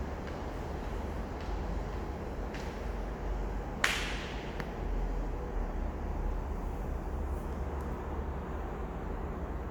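No technical faults can be heard in this recording.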